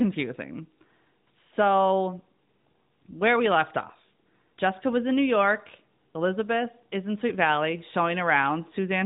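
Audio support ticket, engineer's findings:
No faults found in the speech; the signal carries the expected narrowband mobile-codec character, with nothing above about 3.8 kHz and only light coding texture, consistent with AMR-NB at its highest 12.2 kbps mode.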